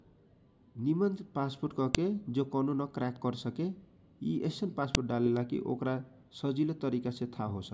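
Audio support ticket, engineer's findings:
Sharp snaps at 1.95 s and 4.95 s in the speech, each a few milliseconds. That's file header played as audio: chunks joined or streamed with their WAV headers left in, header bytes read as samples. The snaps are 3.0 s apart, so each chunk boundary gets one. Check the concatenation or streaming step.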